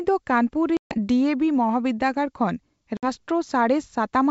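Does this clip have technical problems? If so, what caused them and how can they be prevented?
Yes: packet loss on an ADPCM call, at 0.77–0.98 s (about 140 ms lost) and 2.97–3.07 s (60 ms). Each hole is hard-edged silence. Unlike a plain dropout, the speech then returns slightly distorted, because the decoder's adaptive predictor and step size have fallen out of step with the sender's. Using jitter buffering, redundancy or packet loss concealment that resets the ADPCM state would prevent it.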